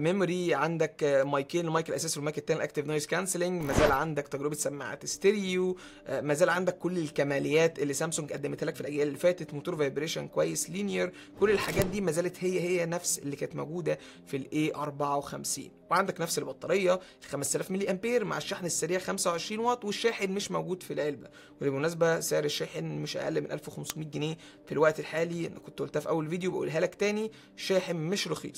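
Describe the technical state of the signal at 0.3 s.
At 0.3 s the signal is intact, with no audible fault at that moment.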